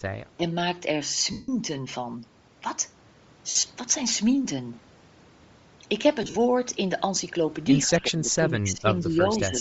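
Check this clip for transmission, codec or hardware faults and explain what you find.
There are four kinds of trouble here: a codec sound throughout, a few dropouts, and some suppression and echo near the start and end.

Bluetooth LC3 compression: The whole clip has a grainy, breathy top end where the upper band sounds noise-filled rather than detailed. That's likely LC3 at a low bitrate, and the character fits something around 32 kbps with 7.5 ms frames. The codec damage is plainly audible.

Lost LE Audio frames: There are three gaps. From 1.32 to 1.49 s there's a solid 165 ms loss. From 3.50 to 3.70 s about 120 ms goes missing, scattered over roughly 195 ms. From 6.22 to 6.36 s about 105 ms is lost across roughly 135 ms. The runs in those last two are up to around 50 ms. The decoder fills each gap by repeating the last spectrum with scrambled phase, so the sound smears into noise and fades instead of cutting cleanly.

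Speech suppressed in double talk: At 0.37 to 0.42 s the level ducks by about 15 dB. From 7.87 s to the end there's patchy dipping of about 10 dB, adding up to roughly a second. This is likely an echo canceller turning everything down while both ends talked at once.

Echo leak: At 9.00 to 9.06 s there's a faint copy of the speech about 157 ms behind, sitting about 25 dB down. That's likely loudspeaker pickup on the far end that the canceller didn't fully remove, so a delayed scrap gets sent back.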